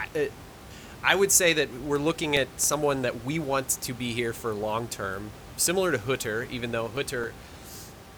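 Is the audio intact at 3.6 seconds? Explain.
Yes, the speech at 3.6 seconds is intact, with only the room's own background noise sitting about 18 dB below it.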